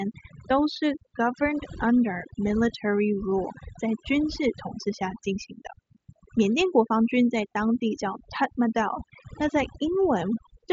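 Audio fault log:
Throughout, overdone noise removal: the background drops and breaks up into twinkling specks, and quiet parts of the voice near the noise estimate are cut with it. Unlike a noise gate, it works band by band rather than muting whole pauses. The top end stops around 7.7 kHz, which fits an mSBC Bluetooth headset link.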